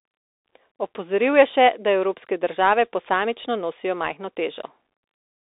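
Speech passed through a Bluetooth CVSD headset codec from start to finish. The delta modulator codes only up or down steps with an adapting step size, consistent with a 64 kbit/s stream. Nothing above 3.8 kHz survives, and the usable band sits at roughly 300 Hz to 3.7 kHz, so the speech sounds thin and boxy. Loud, fast high-frequency sounds outrun the step size and distort, s sounds turn scratchy, and a granular hiss sits beneath the speech.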